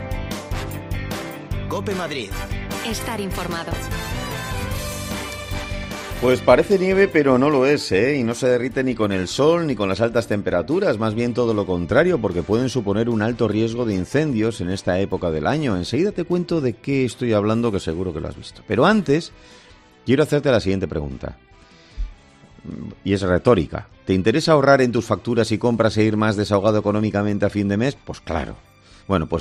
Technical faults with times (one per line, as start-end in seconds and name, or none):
none